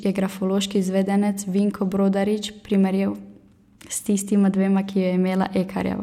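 No technical faults are audible anywhere in the speech.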